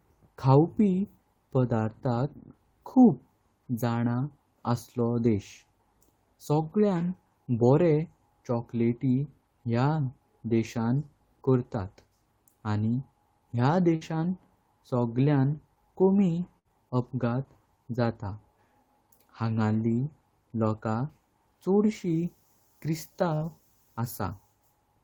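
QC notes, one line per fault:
13.95–14.04 s, burst of packet loss: just after "आनी ह्या", consecutive packets drop out. The receiver stretches the last sound for about 57 ms, fading it out, then resumes with 40 ms missing.
16.59–16.70 s, burst of packet loss: after "सगळ्यान कमी", packets go missing. The concealer holds and fades the preceding sound for 60 ms, 40 ms of speech is lost, and a further 14 ms is cut on resumption.
23.35–23.44 s, burst of packet loss: a run of lost packets is covered by about 59 ms of extended, decaying sound before playback jumps ahead, skipping 40 ms.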